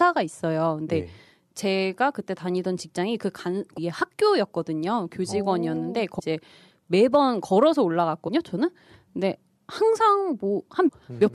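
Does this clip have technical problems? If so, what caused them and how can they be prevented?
Yes. Damaged data in a compressed stream causes brief blips at 3.76, 6.18–6.20, 8.27–8.29 and 10.87–10.89 s. Corrupt bytes make the decoder lose sync and skip ahead. Checksums and error-checked transfer prevent it.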